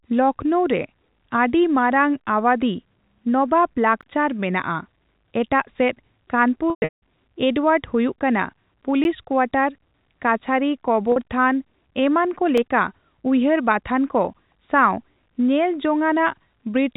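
At 4.01 s, right after "ᱨᱮ ᱟᱹᱰᱤᱢᱟᱨᱟᱝ ᱟᱣᱟᱫᱷᱤ ᱱᱚᱵᱟᱵ", there is a block of digital silence. The sound drops out for 16 ms. The cut has no fade, so it lands as a short hole. The output buffer was likely not filled in time.

From 6.7 to 7.0 s, after "ᱥᱮᱫ ᱠᱟᱱᱯᱩᱨ", comes packet loss with pitch repetition. About 300 ms is lost across 320 ms, with the longest run at 180 ms. The receiver loops the last pitch period, which gives a buzzy hold. It fades to silence and then cross-fades back at "ᱮᱰᱣᱟᱨᱰ ᱦᱩᱭᱩᱜ ᱠᱟᱱᱟ".

At 9.04 s a second block of silence gives a 10.67 ms tick. That length fits a 512-sample buffer.

At 11.12 s, after "ᱠᱳᱣᱟᱴᱟᱨ ᱠᱟᱹᱪᱷᱟᱹᱨᱤ", a 40 ms loss is bridged by repeated pitch. It sounds like a briefly held, buzzy note before "ᱛᱷᱟᱱ ᱮᱢᱟᱱᱠᱚ ᱞᱮᱠᱟ ᱩᱭᱦᱟᱹᱨ".

At 12.57 s a 2.31 ms block of silence is a tick.

Throughout, the G.711 A-law telephone coding limits the sound to below 4 kHz.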